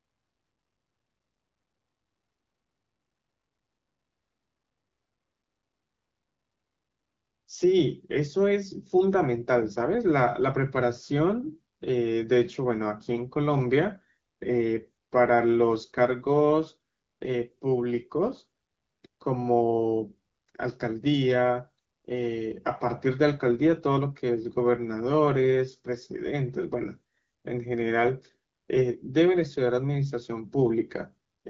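No technical faults are audible.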